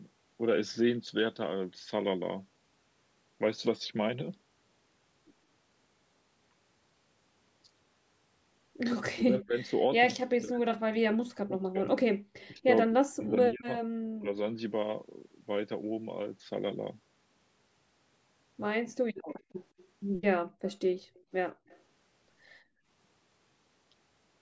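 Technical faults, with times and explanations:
9.09–14.35 s, speech suppressed in double talk: the talker's level sinks by around 40 dB for about three seconds in total. The likely cause is an echo canceller that could not tell this voice from loudspeaker echo during overlapping talk and attenuated both. The waveform shows the envelope collapsing, and the spectrogram shows the harmonics fading.
12.16–12.23 s, 19.14–19.27 s, 20.45–21.67 s and 22.62–22.87 s, background gated by the echo canceller: while the far side's audio played, the canceller clamped the microphone. The room tone drops by about 36, 35, 34 and 22 dB respectively, with about 400 ms affected in the third span, then returns. On the spectrogram these appear as near-silent vertical gaps in the noise floor, and the waveform shows flat stretches.
12.33–12.48 s and 19.28–21.82 s, echo leak: a faint delayed copy of the voice trails it by 164 ms and 167 ms, around 30 dB below the speech. 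This is likely residual loudspeaker pickup that the canceller failed to remove. On the spectrogram it shows as a weak, shifted ghost of the harmonic pattern, and the waveform shows a small trailing copy.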